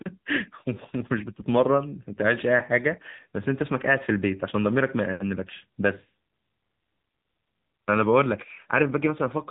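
Speech heard through the AMR narrowband mobile codec for the whole clip, with plainly audible damage: a buzzy, synthetic edge that fits a low AMR-NB mode near 8 kbps. Nothing passes above 3.8 kHz, so a spectrogram shows a hard ceiling there and empty space above.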